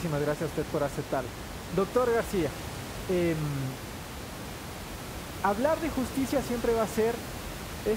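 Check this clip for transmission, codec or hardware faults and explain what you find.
Checking this clip turns up no faults to explain.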